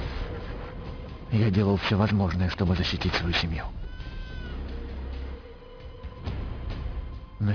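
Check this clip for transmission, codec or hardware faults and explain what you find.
One fault is present: aliasing, across the whole clip. The sound points to a drop from 48 kHz to about 11 kHz without an anti-alias filter. Content above 5.5 kHz folds back below it at only about 10 dB down. Bright detail turns gritty and metallic, and the spectrum runs hard to the 5.5 kHz edge.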